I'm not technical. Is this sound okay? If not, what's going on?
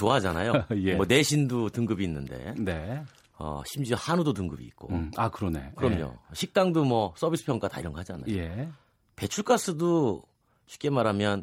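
Yes, this speech recording sounds fine, with no technical problems to point out. There is nothing here that needs fixing.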